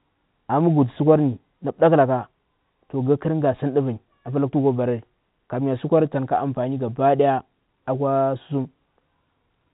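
A speech clip with nothing technically wrong with it, heard through ordinary G.711 telephone coding that passes nothing above 3.9 kHz.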